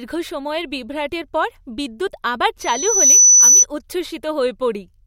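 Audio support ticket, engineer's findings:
Loudspeaker feedback squeal, 2.60–3.65 s, after "বিভ্রাটের পর বিদ্যুৎ আবার": 6 kHz tone swelling over about half a second to roughly 15 dB above speech; mic-to-speaker loop gain exceeding unity.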